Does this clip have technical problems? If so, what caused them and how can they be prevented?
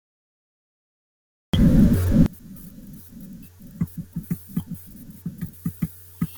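Yes. From 2.26 s to the end, the speech collapses to a faint remnant about 28 dB quieter, with the centred voice almost gone. This is the sound of one channel inverted: the likely cause is one stereo channel with reversed polarity, so when left and right are summed to mono, everything common to both cancels and only the small difference between them survives. To prevent it, check polarity on each channel (for example with a correlation meter or a mono fold-down) before recording and mixing, and correct any wiring or plugin that flips one side.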